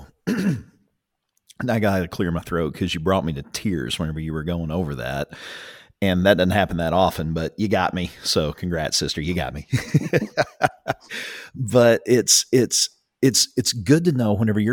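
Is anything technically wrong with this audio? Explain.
No, nothing in this speech recording points to a technical fault.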